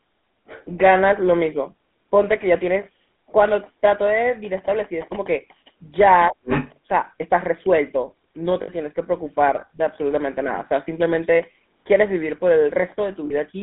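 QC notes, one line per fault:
Throughout: GSM full-rate codec. A buzzy, gravelly roughness and nothing outside roughly 200 Hz to 3.7 kHz, which fits a 13 kbps pulse-excited vocal-tract coder.
0.46–0.65 s, 3.27–3.32 s, 6.44–6.79 s, 9.61–9.68 s, 10.58–10.62 s: other side's voice leaking through. Scraps of a second voice, most likely loudspeaker echo the canceller missed. At 6.44 s it is slightly louder than the talker.
6.31–6.36 s: speech suppressed in double talk. A 50 ms dip of about 20 dB, likely the echo canceller ducking the talker while both sides spoke.
8.62–8.70 s and 13.26–13.33 s: lost GSM frames. Gaps of 60 ms and 40 ms are filled by repeating the last good frame, which gives a brief metallic ring.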